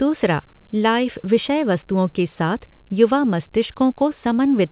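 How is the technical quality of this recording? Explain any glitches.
Nothing in the recording stood out as a glitch or technical problem on listening, with the speech coming through the call path as expected for a narrowband line that carries nothing above about 4 kHz.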